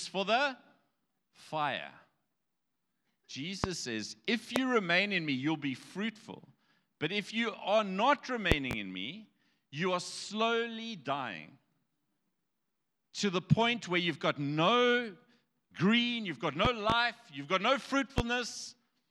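A speech clip marred by loud pops at 3.64 to 3.68 s, 4.56 to 4.60 s, 8.52 to 8.75 s (a double pop), 16.65 to 16.94 s (another double) and 18.18 to 18.22 s, peaking about 20 to 25 dB above the speech. Unlike breath plosives, these are sharp electrical spikes with the speech continuing unbroken beneath, likely from a switch, connector or static discharge.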